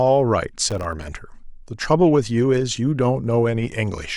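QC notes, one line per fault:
0.70–1.04 s, processor overload crackle: a dense run of tiny silent gaps with hard edges tears through the speech as gritty crackle. Each gap points to a missed buffer of roughly 1.5 ms, and over a dozen miss across the stretch, unlike a single dropout's one clean hole.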